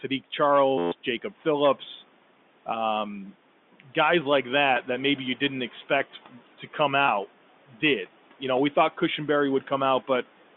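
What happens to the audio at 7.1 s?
Around 7.06 to 7.08 s the sound briefly catches and turns slightly buzzy, as though a single pitch cycle were held for a moment before the speech carries on. This is packet loss with pitch repetition. About 20 ms of audio never arrived, which fits two 10 ms packets, and the receiver filled the gap by looping the last pitch period. Because the gap is so short, the result is a brief held tone rather than a fade into silence.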